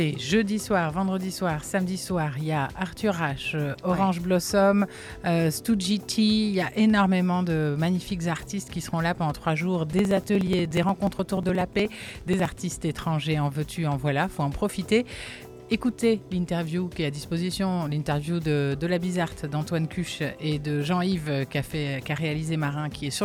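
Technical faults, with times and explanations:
9.93 to 12.58 s, periodic USB or driver dropouts: a run of evenly spaced ticks every 0.06 s, about 50 in all. Each time a few milliseconds of audio are skipped outright as a background task stalls the USB bus or audio driver, leaving a small discontinuity that clicks against the surrounding signal.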